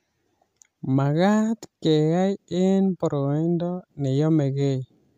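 No technical faults can be heard anywhere in the speech. Nothing in the recording calls for a timestamp or a fix.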